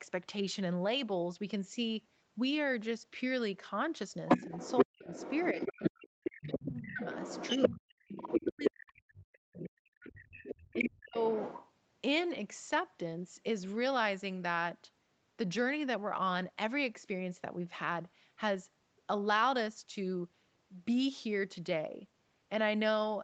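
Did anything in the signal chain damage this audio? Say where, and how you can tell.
Yes. The call processing stage let the other side's voice leak through. From 4.28 to 8.70 s a second voice runs under the talker at roughly the same level. From 9.63 to 11.71 s it returns about 10 dB lower. The likely cause is the far end playing on a loudspeaker and reaching the microphone, with the echo canceller failing to subtract it.

The same stage also suppressed speech in double talk. In three windows, 4.47 to 7.02 s, 7.57 to 10.18 s and 10.72 to 11.21 s, the talker's level drops in pieces by around 40 dB. That adds up to roughly one and a half seconds, two seconds and half a second of affected sound. Each window overlaps the leaked voice, so the canceller likely turned everything down when it could not separate talker from echo.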